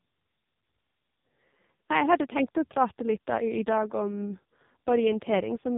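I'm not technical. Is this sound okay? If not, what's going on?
No. The whole clip has gone through an AMR narrowband mobile codec at heavy compression: nothing above 3.8 kHz survives, so speech sounds muffled, buzzy and synthetic, like an old phone call.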